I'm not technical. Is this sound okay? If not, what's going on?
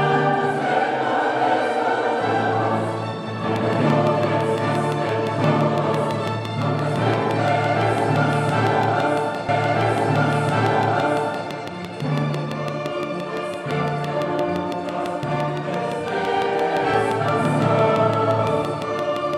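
No, it isn't. From about 3.56 s right to the end there's a train of clicks: steady ticking, about six a second and roughly seventy in all, poking out above the sound, gaps included. Likely interference from nearby gear or a faulty connection or power supply.

Then there's a stream segment repeated. At 9.48 s the player jumps back and plays about two seconds of audio over again, through 11.47 s, with a small blip at the jump. The player fetched or queued the same chunk twice.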